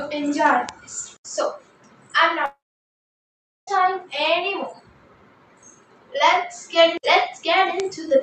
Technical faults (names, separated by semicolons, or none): bit error spike; long network dropout